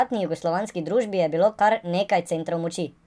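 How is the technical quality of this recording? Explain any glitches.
The recording has one fault, present from start to finish: a wrong sample rate. Throughout, the speech runs 1.38 times too fast and sits about 5.6 semitones high, which fits audio captured at 16 kHz being played back at 22 kHz without conversion. Because every sample arrives sooner than intended, speed and pitch rise together, giving a hurried, chipmunk-like voice. On a spectrogram, the harmonics and formants are shifted upward and the upper limit of the content sits near 11 kHz instead of 8 kHz. On the waveform, every syllable and pause is squeezed shorter in time.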